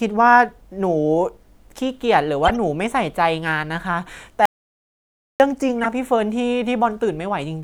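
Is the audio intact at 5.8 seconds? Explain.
No. A corrupt frame decoded runs from 5.75 to 5.86 s. Flipped bits in a few compressed frames were decoded anyway. Misread gains and codes push energy into wrong frequencies for about 0.11 s. The result is a brief chirpy burst of noise over the speech.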